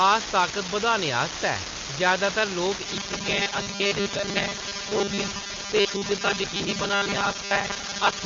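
From the start, one data line is marginal, so an unreliable data bit flips in a random share of samples, each error an identical spike. The result is a steady crackle, a fine fizz that continues through the pauses and runs under the whole clip.

From 2.86 s to the end, new audio is likely arriving too seldom, so short buffers are replayed and about half the sound is repeats. This robotic sound from repeated short buffers imposes a rigid 200 Hz buzz, which fits a 5 ms buffer, and the speech turns metallic while still loosely following the words.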